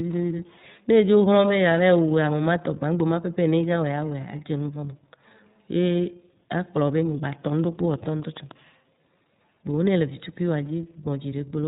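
From the first moment to the end, the speech has gone through the iLBC codec, and you can plainly hear it. Everything above 4 kHz is gone, so it sounds boxed-in and telephone-narrow, with a slightly rough, synthetic grain. Each chunk of excitation is coded on its own, and the texture points to the 30 ms frame mode, which would fit a rate around 13.33 kbps.

Then from about 7.50 to 8.52 s there's a train of clicks: roughly seven near-identical pops at a steady 6.9 per second, ticking over the speech and poking out a few dB above it. That regular, same-shaped pattern is likely interference from nearby equipment or a struggling interface pushing a pulse into the signal over and over, rather than anything in the speech itself.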